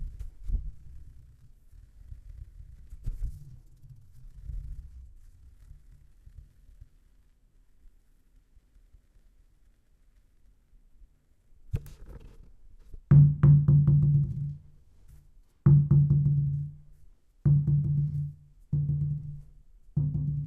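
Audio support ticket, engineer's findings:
No audible faults found in the everyday-sound recording; no symptom to trace to capture, processing or playback.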